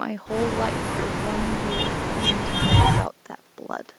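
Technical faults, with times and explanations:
No technical faults are heard; the background room noise sits about 29 dB below the speech and belongs to the recording itself.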